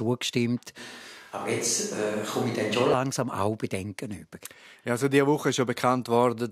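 A speech clip with a switch to a distant microphone from 0.79 to 2.94 s: the voice abruptly turns roomy and hollow, thinner in the bass, with background noise near 30 dB below the speech. The level barely changes, but the sudden switch in and back out separates it from gradual reverb, likely a close microphone dropping out.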